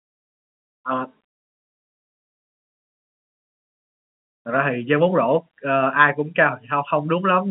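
No technical faults are audible.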